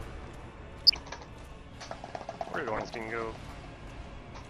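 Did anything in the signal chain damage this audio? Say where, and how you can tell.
Yes. Throughout, the sound is dull, granular and gurgling. That is MP2 compression at the codec stage, likely at a low rate around 80 kbps. Upper sub-bands drop out.

DAB burbling appears from 0.71 to 0.97 s and from 2.54 to 2.83 s. Short blips of noise in single sub-bands mark it. A small rate of transmission bit errors got past error correction and corrupted sub-band samples.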